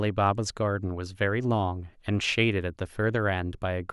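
Nothing here to flag, as the speech runs its whole course without a single audible glitch or disruption along the way.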